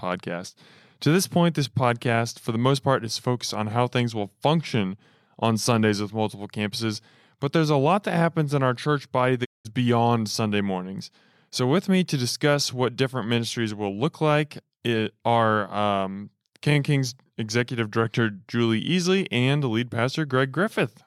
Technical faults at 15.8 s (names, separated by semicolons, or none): none